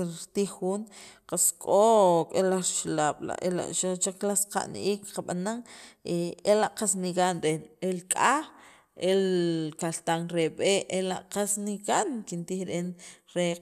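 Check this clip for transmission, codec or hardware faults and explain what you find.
No audible faults in the speech, and nothing here points to a transmission, codec or hardware problem.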